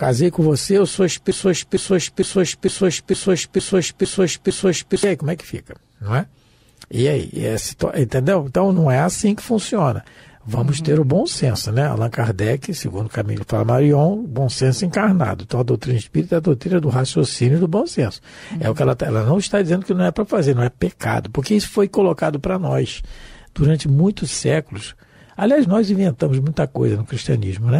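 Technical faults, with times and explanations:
1.31–5.03 s, broken-record loop: a fragment about 0.46 s long plays eight times back to back, each repeat identical, so the sound sticks in place for nearly four seconds before moving on. The cause is likely a stall in the player, encoder or stream that kept resending the last chunk it held. The audio that belonged in that stretch is gone, not delayed, so the sound jumps ahead when the loop ends.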